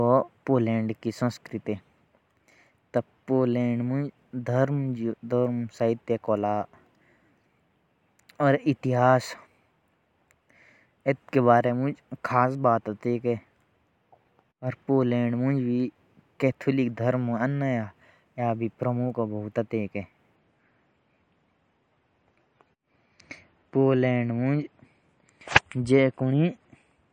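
At 20.36 s the speech abruptly loses treble above 10.5 kHz and turns grainy until the end. This is an adaptive stream at a lower bitrate, consistent with a fall from 128 to 40 kbit/s MP3.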